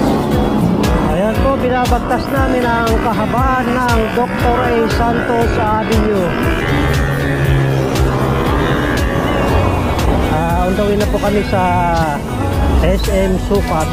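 No technical fault can be heard anywhere in the audio. There is nothing to place on the timeline.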